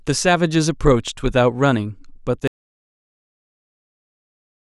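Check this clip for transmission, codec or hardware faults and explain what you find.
There is one fault. From 2.48 s to the end the speech drops out to silence, likely because the input was lost while recording continued. Unlike a pause, no room tone remains.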